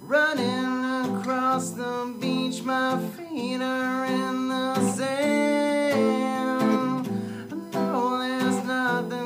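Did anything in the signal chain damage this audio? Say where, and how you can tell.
Yes. A USB whine sits under the whole clip, a fixed-pitch tone built on 1 kHz with its strongest component at 5 kHz, about 35 dB below the signal. The bus's 1 ms frame activity is pulling current that leaks into the analogue wiring through shared power or ground.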